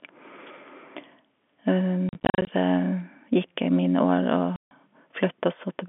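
From 2.09 to 2.47 s the speech is riddled by packet loss filled with silence. About 200 ms is missing, scattered across 380 ms in short dropouts of up to 40 ms, which fits 10 ms packets. At 4.56 s a solid 150 ms hole follows. The waveform falls to silence with abrupt edges. The spectrogram shows blank vertical bars framed by thin broadband lines, inside the narrow telephone band.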